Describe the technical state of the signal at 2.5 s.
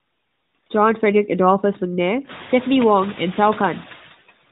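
At 2.5 s the signal sits inside a run of lost AMR speech frames, from 2.44 to 2.51 s, about 60 ms, which fits three consecutive 20 ms frames. The decoder repeats its last good pitch and vocal-tract settings at falling gain, so the speech smears briefly and dips in level before resuming.

Noise suppressor artifacts are also present here, cutting the estimated steady noise by about 15 dB. Because the room noise rises at roughly this point, the suppressor's frame-by-frame gain changes act on the rising noise.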